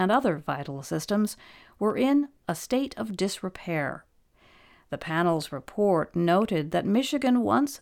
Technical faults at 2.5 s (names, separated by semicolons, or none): CD scratch ticks